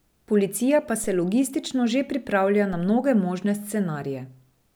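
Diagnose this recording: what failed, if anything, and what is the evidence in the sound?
Two low thumps land in the speech at 1.04 s, just before "se logistično že pripravlja", and at 2.73 s, just before "na mnoge možne". These are DC steps of about −30 dBFS at the converter, where the waveform's zero line jumps and then settles back through a roughly 2 Hz high-pass.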